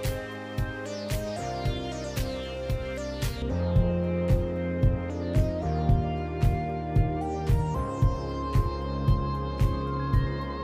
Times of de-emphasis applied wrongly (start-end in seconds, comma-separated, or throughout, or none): 3.42-10.63